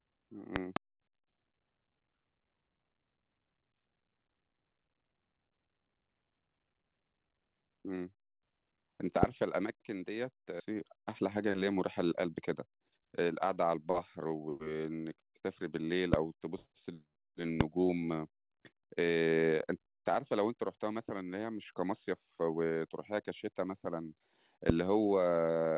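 At 0.56 to 0.79 s there are two loud pops in quick succession, peaking roughly 20 dB above the speech, with the talking continuing underneath. Single loud pops follow at 9.23 to 9.26 s (about 25 dB), 16.14 to 16.16 s (about 20 dB), 17.61 to 17.63 s (about 25 dB) and 24.70 to 24.72 s (about 25 dB). Each is a sharp, brief transient sitting on top of the audio. The likely cause is a voltage step or pulse from a switch, connector, static discharge or driver glitch, shaped by the downstream circuitry into a pop.

At 10.6 s the speech skips ahead. Roughly a second of audio is missing, and the material on either side is butted together with no gap or fill. This is consistent with a stretch being discarded, in transit or by an overflowing jitter buffer, while later audio was already queued. The sudden jump cuts the speech off mid-flow.

From 12.11 to 14.48 s a jitter buffer speed-up runs the speech at about 122% of normal rate while the pitch stays put. 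The receiver, holding more audio than its target, repeatedly removed short pitch-period-sized pieces, about half a second in total, to bring the delay back down. The passage sounds hurried.

Throughout, the G.711 A-law call path band-limits the audio, leaving nothing above 4 kHz.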